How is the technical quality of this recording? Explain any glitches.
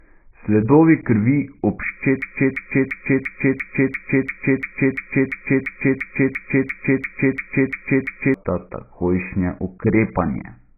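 The recording is poor: heavy codec damage throughout, plus a long stretch where the audio sticks and repeats.

AAC compression, throughout the clip: the speech is cut off above 2.5 kHz and sounds dull, smeared and warbly, which points to a very low bitrate, around 12 kbps. The likely cause is that the encoder discarded most high-frequency detail and coarsely quantised what remained.

Broken-record loop, from 2.22 s to 8.34 s: a 344 ms fragment repeats back to back, about 18 times, and the speech that should fill those six seconds is missing. A stalled player, encoder or stream likely kept resending the last piece it held.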